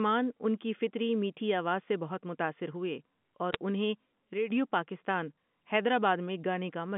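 At 3.53 to 3.56 s, a short cluster of bit errors on a digital phone line produces a few sharp, isolated ticks over the speech. Single bits in the 8-bit logarithmic samples were flipped at a low rate, well under one percent, spread over three frames. Each flip corrupts only one sample, so the speech around the ticks is unchanged. This sets it apart from packet loss, which would leave gaps or smeared stretches. The A-law telephone band is limited to roughly 150 Hz to 3.5 kHz.

From 4.34 to 4.51 s comes a sudden gain jump. The level drops by about 8 dB all at once, with no fade, and returns abruptly. The speech and the line's background hiss fall together, which distinguishes this from a compressor or automatic gain control: those would ramp the level. The step is likely a digital gain setting or bit shift applied without smoothing.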